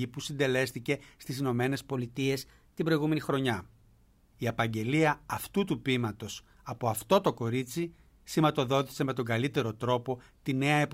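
From 1.93 to 3.30 s there's a wrong sample rate problem. The speech jumps up about 1.5 semitones and runs roughly 1.09 times faster, so it sounds a bit chipmunky and rushed. Pitch and tempo shifting together by the same ratio means the samples were played back faster than they were captured, with no conversion. That ratio fits 44.1 kHz material going out at 48 kHz. It snaps back to normal afterwards.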